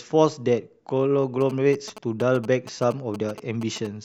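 From 1.41 s to 3.87 s, GSM signalling bursts sit around 15 dB below the speech. A nearby 2G phone's radio pulses, rectified by the audio circuit, give a galloping dit-dit-dit of brief 217 Hz buzzes in clusters, unlike an active call's steady buzz.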